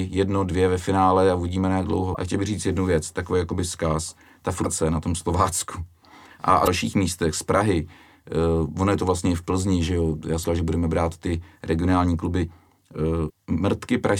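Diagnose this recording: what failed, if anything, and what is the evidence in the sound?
Codec stage: damaged data in a compressed stream. There are five short glitches, each about 40 ms, at 2.13, 4.62, 6.64, 10.41 and 13.26 s, including one right after "že jo já". Corrupted bytes made the decoder misread frames, lose sync and hunt for the next header.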